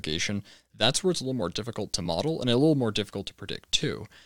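Speech clip with compressed frames skipped at 2.05 s: about three 21.3 ms frames, roughly 70 ms of audio, never play, so the speech jumps ahead.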